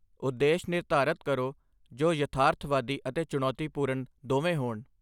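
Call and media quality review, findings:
Nothing stood out on listening to this speech recording.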